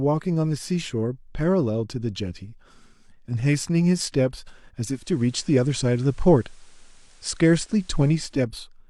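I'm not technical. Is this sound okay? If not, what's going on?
No. From 4.83 to 8.47 s, digital radio blending to analogue: the set switched to the station's FM signal, so faint hiss appears and level shifts slightly.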